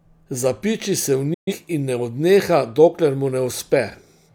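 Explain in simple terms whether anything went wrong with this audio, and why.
A digital broadcast dropout happened: for a moment the receiver stopped getting usable digital data, so it muted the sound until good data arrived again. In this speech clip the sound fades out in about 8 milliseconds at 1.34 s and stays silent until 1.53 s, when it comes back with "in ne odneha". Whatever was said in that gap is simply missing. The length of the hole fits roughly three lost frames of data.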